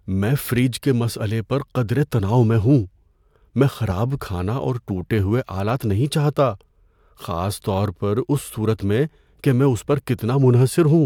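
Speech recording with no technical fault to report at any point in the signal.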